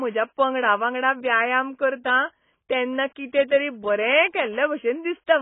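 Heavy AAC compression at a very low bitrate is the likely cause of the damage running through the whole speech clip. Starved of bits, the encoder has given up everything above about 3.8 kHz and coarsely quantised what remains, which fits a rate near 16 kbps. The result is dull and muffled speech, with sibilants reduced to a smeared fizz and a watery warble riding on sustained vowels from start to finish.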